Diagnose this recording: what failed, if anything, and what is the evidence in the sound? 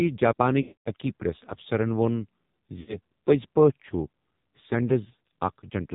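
The codec stage failed first: heavy AMR narrowband mobile codec damage. Nothing is heard above 4 kHz. The speech sounds buzzy and synthetic throughout, which fits a low AMR-NB mode near 5.9 kbps. Too few pulses per subframe leave the excitation coarse and robotic.

The network stage added lost AMR speech frames. From 0.62 to 0.88 s, the sound smears and fades to silence, which fits about twelve 20 ms frames lost. A shorter dropout follows from 2.80 to 2.96 s. The decoder repeats the last settings at falling gain.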